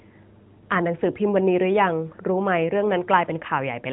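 No faults heard; the speech runs through a narrowband mobile path with nothing above 4 kHz and only light coding colour, consistent with AMR-NB near its top rate.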